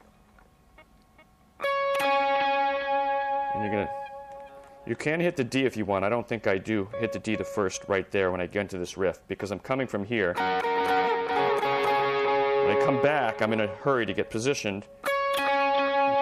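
No technical faults are audible.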